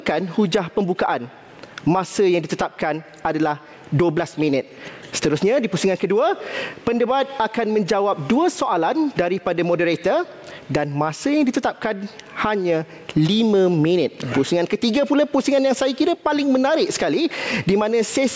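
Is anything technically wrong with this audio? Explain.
Yes. Throughout the clip, the gain swings by about 15 dB, leaving everything squashed. This gain pumping likely comes from input gain set far too high, with a fast limiter repeatedly clamping it. The call-style microphone processing, with nothing above 8 kHz, is not a fault.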